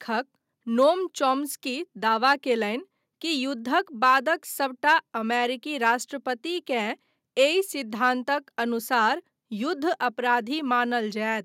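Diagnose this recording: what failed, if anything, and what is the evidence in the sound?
Nothing failed; no stage shows any audible fault.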